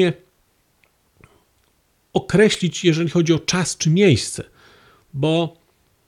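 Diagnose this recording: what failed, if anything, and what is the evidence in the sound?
A single sharp snap lands at 2.54 s, lasting only a couple of milliseconds and peaking fairly high, around -10 dBFS, just before "jeżeli chodzi o czas". It sits on top of the speech rather than interrupting it. The fault is in the analogue wiring: this is likely an electrical switching spike, where a nearby switch, motor or static discharge arcs briefly and the audio line picks up the burst of interference as a click.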